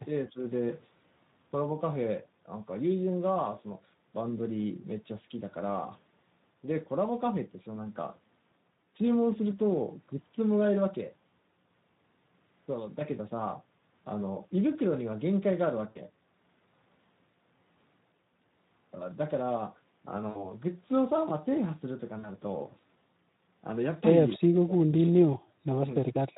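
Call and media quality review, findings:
Speex codec, whole clip: speech hoarse and noisy, excitation thin, with top band a noise-like fill rather than real detail. Damage is plainly audible and consistent, which fits a low-rate Speex mode near 11 kbps. It differs from packet loss because it is constant coloration, not local events. Component: sender or bridge encoder.

VoIP packet loss concealed by the speech codec: 15.89–15.99 s, 20.29–20.52 s, 22.19–22.29 s. Speech briefly smears into a stretched sound that fades. The decoder extrapolates the last pitch and filter, and the voice stays weak just after. The first two fit about 60 ms lost (three 20 ms frames), the third about 40 ms. It differs from suppression by the stretched tone instead of silence. Component: network path and jitter buffer.

Speech suppressed in double talk: 24.35–24.8 s, 25.04–25.85 s, 26.01–26.21 s. The voice drops steeply, by about 40 dB at worst (about 35 dB in the last), in stretches totalling roughly 1.3 s. 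There is no buzz or smear. The likely cause is the echo canceller's far-end AEC attenuating during simultaneous talk.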